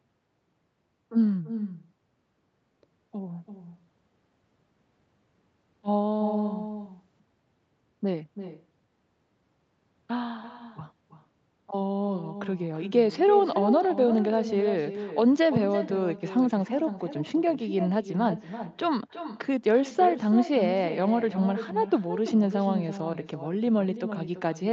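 Throughout the clip, the far end is playing the call over a loudspeaker and its microphone is picking that playback up again, with no echo canceller removing it. This is echo with no canceller: every phrase of the speech returns about a third of a second later as a second copy, about 10 dB quieter and thinner. Because the wideband call path cuts everything above 8 kHz, that trailing shadow sounds dull as well.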